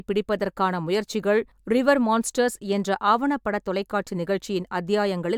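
No technical faults can be heard anywhere in this short speech recording; the signal stays continuous and steady throughout.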